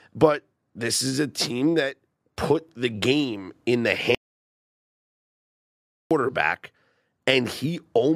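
At 4.15 s, after "the game in the", an audio dropout to silence cuts the speech to silence until 6.11 s, likely a lost input, erasing about 2 s.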